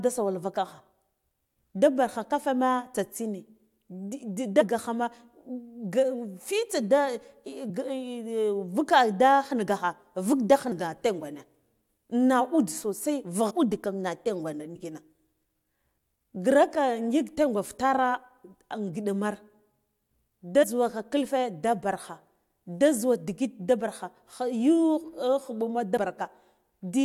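Speech with seven jumps caused by compressed frames skipped, at 4.60, 7.69, 10.71, 13.49, 14.75, 20.62 and 25.96 s. Each time, whole frames of coded audio were missing or rejected by the decoder, so playback leaps forward. The largest gap, at 4.60 s, drops roughly a fifth of a second. The others lose around 50 to 100 ms, consistent with a 23.2 ms frame.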